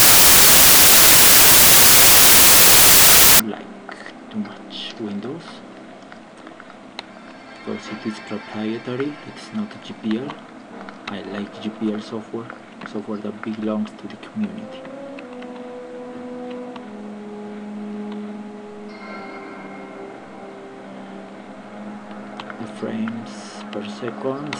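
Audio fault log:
0.00–3.40 s: samples built from the wrong bytes. The opening segment is a burst of loud, broadband hiss rather than the intended signal, because each sample's bytes are being assembled in the wrong order or with a one-byte offset. That promotes the rapidly fluctuating low-order bits into the most significant position, so values jump almost randomly, producing white-noise character.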